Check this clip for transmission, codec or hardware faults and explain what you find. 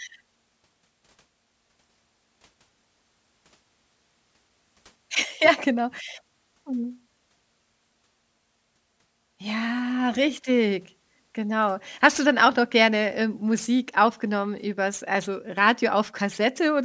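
One fault runs through the whole speech clip: aliasing. It is present from start to finish. The audio was downsampled without an anti-aliasing filter, which fits a drop from 44.1 kHz to a 16 kHz rate. Energy above 8 kHz folds back below it as unrelated tones, roughly 25 dB under the speech. This gives sibilants a gritty, metallic edge and packs the spectrum hard against 8 kHz.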